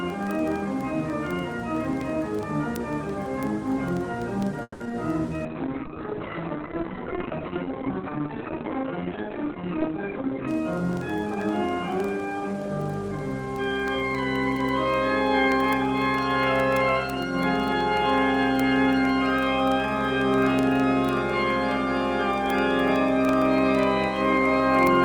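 Word clock ticks run from 0.10 s to the end, single-sample clicks about every 40 ms from a receiving clock roughly 500 ppm off the sender's; on a spectrogram they form evenly spaced thin vertical lines. Between 4.62 and 4.94 s the audio stalls four times as the jitter buffer empties, a repeated stall (stutter) where 210 ms is filled by continuing the last sound and 30 ms is lost, the longest wait 180 ms. The waveform shows repeated, fading stretches there. A call bitrate drop from 32 to 9 kbps lasts from 5.45 to 10.53 s, making the sound rough and muffled as the band falls from 20 kHz to 4 kHz. On the spectrogram, everything above 4 kHz goes dark. A jitter buffer speed-up plays audio at 106% speed with unchanged pitch from 10.26 to 12.69 s, removing roughly 150 ms, and from 13.61 to 14.14 s, roughly 40 ms. The clip sounds hurried there, and the waveform is slightly compressed in time, with no visible gaps.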